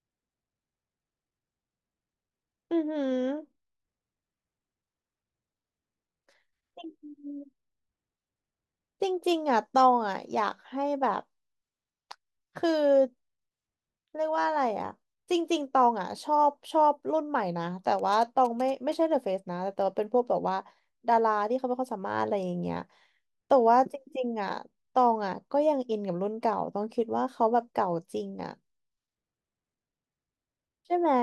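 A nearby 2G phone transmitting signalling bursts is being rectified by the audio circuit, putting GSM signalling bursts into this speech clip from 17.99 to 18.94 s as a galloping dit-dit-dit of short 217 Hz buzzes, roughly 20 dB below the speech.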